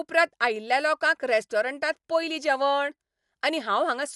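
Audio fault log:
Throughout: Dolby Digital compression, plainly audible across the speech. Nothing survives above about 11.5 kHz, so the sound is dull. Around voiced tones there is a rough, fluttering noise, the mark of a starved encoder that, likely near 64 kbps, gave many frequency lines no mantissa bits and let the decoder fill them with dither noise. A spectrogram shows a hard ceiling at 11.5 kHz and speckled, noisy patches between harmonics rather than clean gaps.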